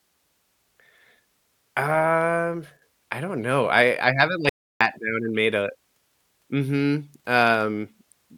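A speech recording with two brief faults. From 2.77 to 2.82 s, just before "I don't know", the level sags abruptly by about 6 dB for roughly 50 ms and then recovers. This is a one channel drops out fault: one side of the stereo pair was likely lost for that instant, so after the mono sum the material shared by both channels fell to half its amplitude, and anything carried only on the missing side vanished. From 4.49 to 4.81 s the sound stops dead for about 314 ms, with no room tone at all, and resumes mid-flow on "down and made a". This is an audio dropout to silence: the input was likely interrupted, through a disconnected device, a failed link or a stray mute, while the recorder kept writing silence. Whatever was spoken in that gap is gone.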